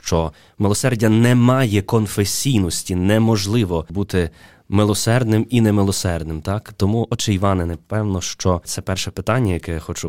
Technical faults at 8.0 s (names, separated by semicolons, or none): none